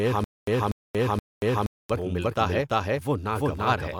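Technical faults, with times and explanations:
Throughout, doubled audio track: the speech is heard twice, with a second full-band copy trailing the first by about 300 ms at roughly the same loudness. It has none of the decay or room colouring a real echo would carry; it is simply an identical take out of step. This most likely comes from the audio being captured a second time through a slower path, or from an edit that left two copies misaligned.
0.00 to 1.90 s, stutter with silent gaps: the clip opens already caught in a stutter. A short fragment of about 241 ms plays, then about 233 ms of dead digital silence follows, and the same fragment returns three times at an even pace of roughly one cycle every 474 ms. This is likely a stalled player or stream that replayed its last fragment on each retry and then ran empty. The speech that should have filled that stretch is lost.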